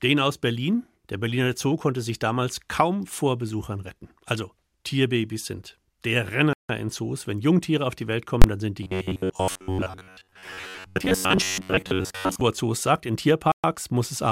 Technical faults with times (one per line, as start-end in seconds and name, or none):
6.53-6.69 Bluetooth stall
8.42-8.44 invalid numbers at full scale
8.83-12.41 robotic sound from repeated short buffers
13.52-13.64 Bluetooth stall